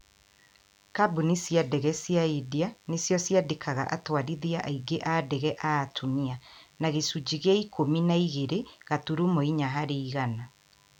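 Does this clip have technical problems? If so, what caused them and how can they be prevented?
Yes. A nearby DECT handset or base station transmits a short radio burst every 10 ms, and the audio circuit rectifies it, causing DECT cordless phone buzz: a thin 100 Hz buzz rich in harmonics, present throughout, sitting faint, roughly 35 dB under the speech. Prevent it by moving DECT equipment away from microphones and cables and using shielded, balanced connections.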